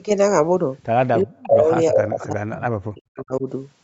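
From 1.23 to 1.71 s and again from 1.89 to 3.46 s the speech sinks by roughly 40 dB. This is likely speech suppressed in double talk, where the canceller ducks both talkers at once.

From 2.02 to 2.24 s a copy of the speech returns 355 ms late, only about 5 dB quieter. It is likely an echo leak through the loudspeaker path, and the long, distinct delay sets it apart from room reverberation.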